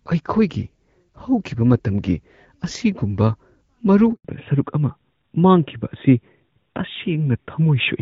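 Speech carried over a mobile call, with a handover gap from 4.13 to 4.25 s: the sound dies away within a few tens of milliseconds and stays silent for 120 ms before resuming. This is the signature of the call being passed between networks while no speech frames arrive, so whatever was said in that window is simply lost rather than concealed. From 4.25 s to the end comes a fallback to narrowband. Before the gap the audio has the open, extended top end of HD Voice, with light codec colouring consistent with AMR-WB at around 12.65 kbit/s. After it, everything above 4 kHz is gone and the sound turns duller and rougher. That fits the link renegotiating down to the older AMR narrowband codec, plausibly at its 12.2 kbit/s mode, as part of the same network switch.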